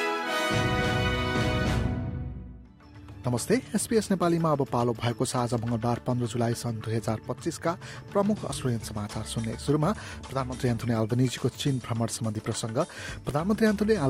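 No technical faults turn up anywhere in the clip. Nothing in it breaks, drops out or distorts at any point.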